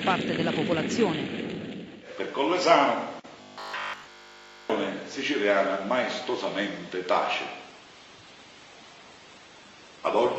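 From 3.42 to 4.70 s the sound turns into a rigid, metallic buzz pitched at 50 Hz. This is robotic sound from repeated short buffers, likely caused by audio arriving too slowly, with a 20 ms slice replayed over and over while the real signal is skipped.

At 7.62 s the quality drops abruptly, without any gap, and stays degraded to the end as codec artefacts rise. This is an adaptive stream at a lower bitrate, which fits Opus falling from about 64 to 16 kbit/s.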